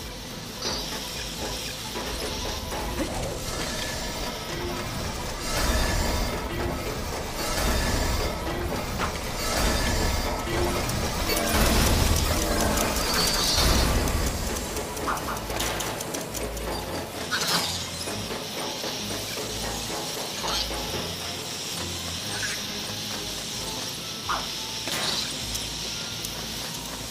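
From 11.60 s to 17.24 s the audio carries a doubled audio track: a second full-band copy trails the original by about 200 ms, sitting roughly 5 dB lower. It sounds like a dry, hard slapback with no room tail, and it cuts in and out abruptly at both ends. The likely cause is the same signal arriving again through a slower path. On a spectrogram, every onset repeats as a fainter identical echo shifted right. The waveform shows matching paired transients.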